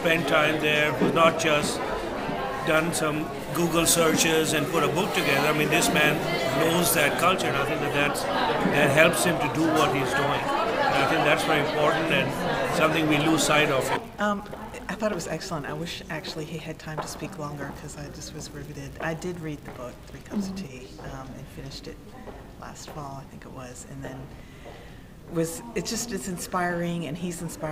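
From 3.39 to 7.25 s, pre-emphasis is left on: a treble boost matching the CD 50/15 µs curve was never undone, lifting 10 kHz about 8 dB above 1 kHz. The sound turns thin, bright and sibilant, and a spectrogram shows noticeably denser energy in the upper bands for that stretch.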